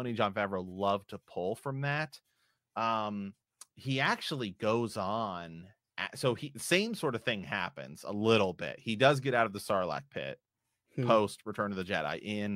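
No technical faults are audible.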